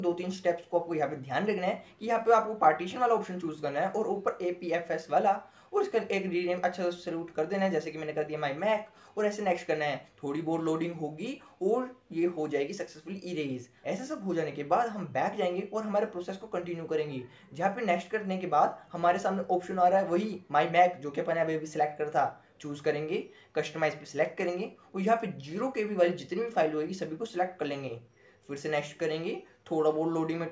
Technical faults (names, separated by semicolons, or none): none